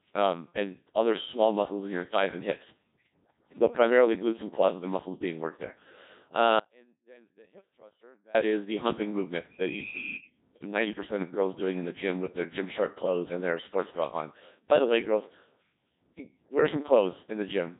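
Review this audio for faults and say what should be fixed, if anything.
Speech was carried through the Codec 2 vocoder, heavily damaged, which fits its 1.6 kbit/s mode. It keeps only pitch, voicing, energy and a spectral envelope, then rebuilds the voice from sine waves, so it sounds robotic and buzzy with nothing above 3.8 kHz. To prevent this, carry the speech over a waveform codec at a higher bitrate instead of a low-rate vocoder.

From 6.60 to 8.35 s the wanted signal was likely lost upstream while the path after the break stayed live. That causes an audio dropout to a faint residue lasting about 1.75 s: the speech cuts out abruptly, leaving only faint sound roughly 30 dB below normal, then snaps back. To prevent this, secure and monitor the input connection or link feeding the recorder so the source cannot drop out mid-recording.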